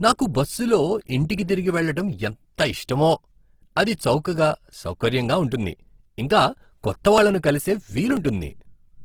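A speech clip with plainly audible Opus compression the whole way through. The sound comes out rough, grainy and a bit noisy rather than swirly, likely from music-mode (CELT) encoding at a low bitrate around 16 kbps, though the band still reaches about 20.2 kHz.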